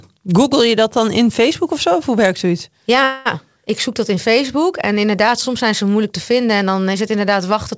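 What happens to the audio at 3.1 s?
A call audio freeze runs from 3.04 to 3.27 s. The last sound is drawn out into a fading buzz or hiss for 215 ms, and then the speech resumes exactly where it stopped. Nothing is lost, but everything afterwards arrives 215 ms later. Delayed packets likely drained the jitter buffer.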